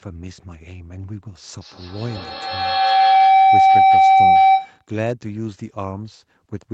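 From 1.61 s to 4.88 s a feedback howl builds: the microphone-to-loudspeaker loop adds level on every pass, so repeats grow instead of fading, narrowing to a tone around 700 Hz with repeats roughly every 150 ms and peaking about 14 dB above the speech.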